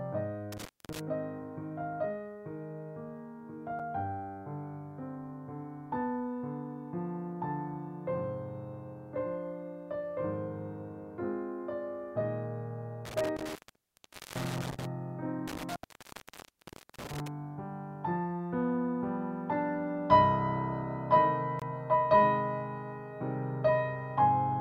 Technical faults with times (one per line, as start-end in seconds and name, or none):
0.52-0.99 intermittent contact
3.79 block of digital silence
13.05-14.85 intermittent contact
15.48-17.28 intermittent contact
21.59-21.62 block of digital silence